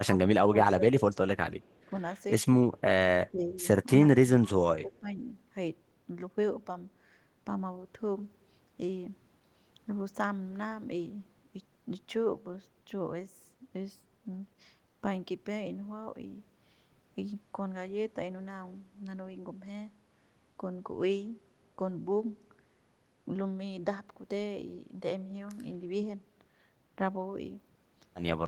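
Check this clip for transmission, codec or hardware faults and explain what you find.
Two faults affect the first five seconds of this speech clip: speech suppressed in double talk, and a brief echo leak.

Speech suppressed in double talk occurs at 0.53–1.01 s, 1.35–1.54 s, 1.86–1.92 s, 3.3–3.64 s, 4.08–4.18 s and 4.38–5.18 s. The level dips by roughly 5 to 15 dB in short pieces, most deeply at 3.3–3.64 s and 4.38–5.18 s. This is likely an echo canceller clamping down while both ends talk.

Echo leak occurs at 1.66–1.85 s. A faint delayed copy of the speech, around 40 dB below it and arriving 377 ms late, slips through. This likely comes from a side playing the call on a loudspeaker whose echo canceller left some residue in its microphone feed.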